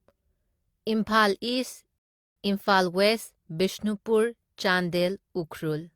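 At 1.98 s the speech drops into silence for about 0.38 s, then picks up at 2.37 s exactly where it left off, with nothing missing. This is a rebuffering stall: playback exhausted its downloaded audio and waited for more, adding 380 ms.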